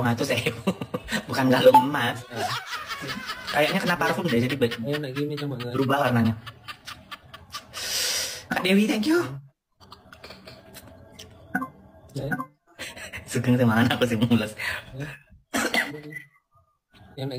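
Throughout, crude rate conversion adds a gritty, inharmonic fizz that tracks loud and bright passages. It fits nearest-sample repetition when stepping from 32 kHz up to 44.1 kHz, with no filtering. The spectrogram shows faint mirrored lines unrelated to the harmonics, roughly 20 dB down, while the waveform shows duplicated-sample steps.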